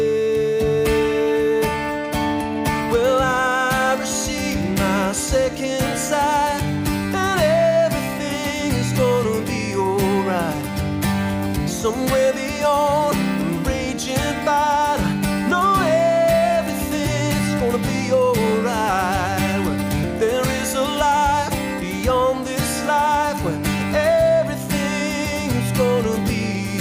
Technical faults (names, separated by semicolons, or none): none